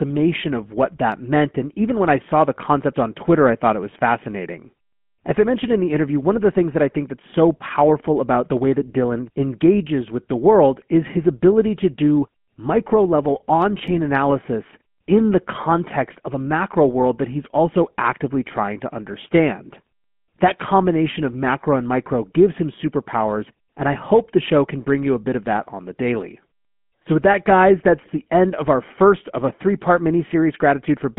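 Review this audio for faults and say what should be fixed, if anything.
GSM full-rate codec, throughout: speech is band-limited to 150 Hz to 3.4 kHz and sounds buzzy and gravelly from pulse-excited vocal-tract modelling, which fits 13 kbps GSM full rate.

GSM bit errors at 13.88–13.97 s, after "do micro level on", and at 27.99–28.10 s, after "with that guys": corrupted filter, pitch and gain values cause brief squawking, gargling bursts.

To prevent both, capture the source directly or over a wideband, error-protected link instead of a weak GSM call.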